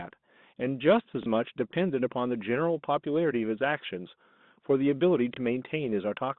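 Speech over a G.711 telephone line, band-limited to roughly 150 Hz to 3.7 kHz, has two small blips at 1.23 s and 5.34 s. Both come from packet loss with the last packet repeated: a 30 ms gap, consistent with a single lost 30 ms packet, filled by replaying the previous packet. The waveform shows a copied segment.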